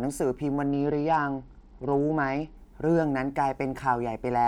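From 0.67 s to 2.57 s the speech turns dull and muffled, its treble gone, while a gritty, grainy noise rides under it; then the brightness returns. This is a Bluetooth SBC bit pool drop. The link apparently got congested and the sending device cut the SBC bit pool, perhaps from 31 to around 10, which fits a stream near 77 kbps. Starved of bits, the upper sub-bands were dropped and the remaining bands coarsely quantised until the rate recovered.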